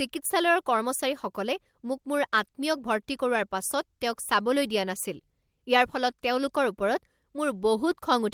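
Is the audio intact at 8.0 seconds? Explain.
Yes, at 8.0 seconds the speech plays through intact, with no dropout, click, distortion or other fault at that moment.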